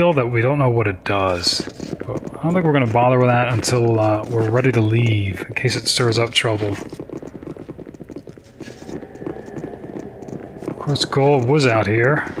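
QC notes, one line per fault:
Throughout: clock drift between sender and receiver. The sender's clock runs roughly 1.5% slow against the receiver's, so the jitter buffer keeps draining. Unlike random network jitter, the resulting timing hiccups all lean one way, recurring at uneven intervals rather than appearing as isolated dropouts.
0.63 to 12.02 s: repeated timing corrections. To keep the drained buffer supplied, the receiver repeatedly stretches short pieces, adding about 200 ms in all and leaving playback near 99% speed. Unlike a steady resampling slowdown, the edits are unevenly spaced.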